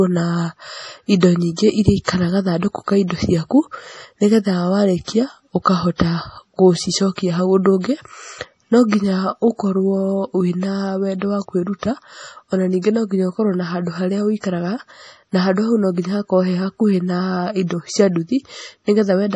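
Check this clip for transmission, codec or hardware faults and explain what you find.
Two codec faults are present in this speech.

MP3 compression, throughout: nothing above 11.4 kHz, with watery, swirly artefacts on s sounds from heavy bit-starved quantisation, likely a low-bitrate encode, consistent with about 32 kbps.

Pre-echo, 5.96 to 6.00 s: block quantisation noise spreads about 40 ms ahead of a sharp attack, so a brief hiss precedes it and the onset sounds smeared.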